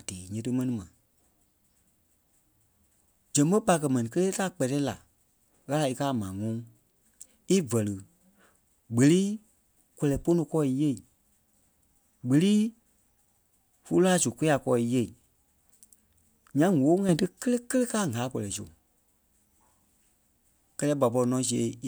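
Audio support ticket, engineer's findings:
Sudden gain jump, 17.09 to 17.26 s. Speech and noise floor both step up about 6 dB in one go, hold for roughly 0.17 s, then drop back. No ramp in or out, so it's a hard step in digital gain. Likely a gain setting or bit shift being applied instantly somewhere in the processing chain. Worth checking whatever touches gain around there and making sure changes get smoothed.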